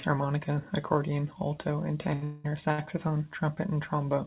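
Speech carried over a call path whose audio stops at 4 kHz, which fits a G.711 A-law link, has two short stalls from late packets: just after "harmonica accordion alto and", a packet arrived late and the jitter buffer ran dry, so the last sound is held for about 78 ms at 2.14 s. A second stall at 2.72 s stretches the sound by 60 ms. Directly after the first stall, from 2.24 to 2.46 s, there is a call audio freeze, likely from packets held up in transit: the held sound continues as a fading buzz for about 0.2 s, then the speech resumes from the same place, so time is inserted rather than lost.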